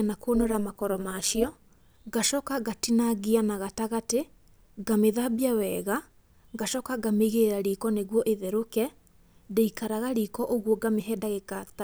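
From 0.35 to 1.79 s, just before "ngacoka ngatinangia na gatagatĩ", the speech carries overlap-add ripple. The frames were rejoined with windows whose overlap does not sum to a constant gain, so the level dips and swells once per frame, roughly 200 times a second and about 11 dB deep. That gives a metallic buzz with extra tones around the speech. Unlike added hum or buzz, it does not come from a separate source: it chops the speech's own level, and it ends at 1.79 s.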